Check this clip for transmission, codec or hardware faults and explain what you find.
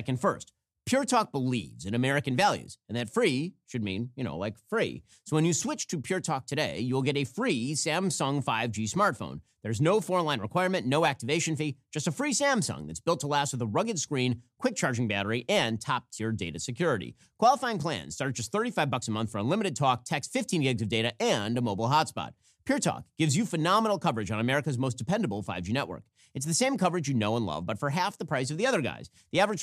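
No faults found in this recording.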